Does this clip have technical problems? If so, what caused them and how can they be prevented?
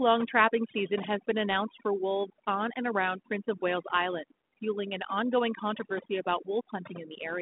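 Yes. Overdone noise removal runs throughout the speech. The reducer cuts any frequency band near its noise estimate, taking quiet speech detail along, so the background breaks into twinkling specks. A spectrogram shows scattered isolated dots between phrases and holes inside the speech. Setting the reduction gentler, and capturing less noise at the source, prevents it.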